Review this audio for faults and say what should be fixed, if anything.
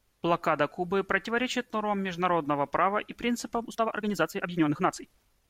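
From 3.58 s to the end at 5.49 s, the speech has a time-stretched section. Right after "нормам международного права и", the pace jumps to about 1.72 times normal speed. The pitch stays where it was. The sound turns rushed. The likely cause is software squeezing this stretch to fit a set length, dropping short pieces to keep the pitch. Prevent it by editing the content to fit, rather than compressing the timing.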